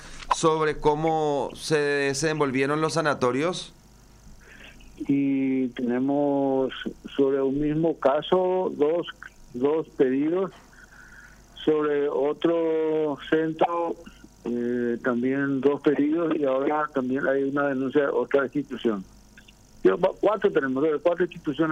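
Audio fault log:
No faults detected anywhere in this audio.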